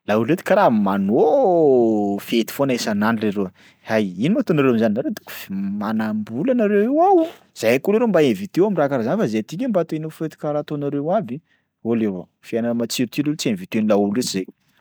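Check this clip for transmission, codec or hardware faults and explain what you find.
Nothing audible in the speech signal points to a transmission, codec or hardware problem.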